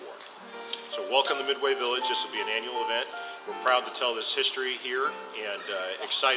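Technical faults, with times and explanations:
No technical faults detected.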